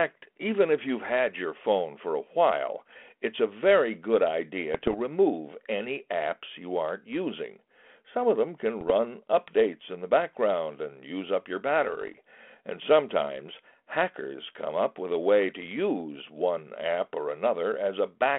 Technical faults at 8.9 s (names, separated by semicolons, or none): bit errors on an ADPCM link